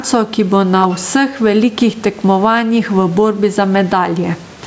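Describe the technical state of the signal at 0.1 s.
At 0.1 s, gain pumping is present, as throughout. The background swells and ducks by around 10 dB, likely from excess gain driving a fast limiter.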